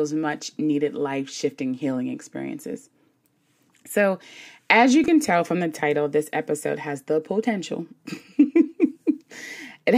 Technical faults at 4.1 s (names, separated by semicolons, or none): none